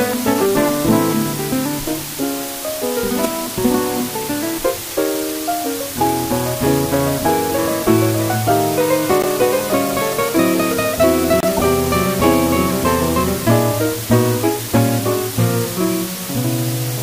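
The audio has been reduced to just 4 bits with dither added before rounding, so the quantisation error turns into a steady, even white hiss with no distortion. That low bit depth with dither leaves the hiss only roughly 10 dB below the signal throughout. Separately, corrupt frames were decoded rather than concealed, so flipped bits put energy at wrong frequencies for a few frames each time. This produces short chirps and noise bursts at 0.34 s, 3.23–3.32 s, 9.21–9.25 s, 11.40–11.62 s and 14.67–14.71 s, loudest around 9.2 and 11.4 s.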